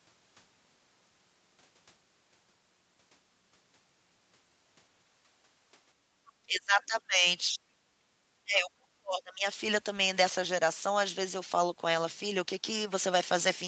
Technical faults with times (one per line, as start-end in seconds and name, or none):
5.96-6.07 background gated by the echo canceller
6.43-7.25 speech suppressed in double talk
7.53-7.61 speech suppressed in double talk
8.44-9.45 speech suppressed in double talk